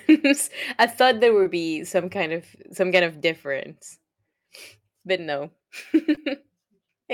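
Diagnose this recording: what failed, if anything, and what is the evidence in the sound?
Short concealed packet loss on the network: around 20 ms of speech failed to arrive in time at 1.43–1.47 s and again at 6.15–6.19 s, which points to one lost packet each time. The receiver extended the preceding sound, leaving brief smears.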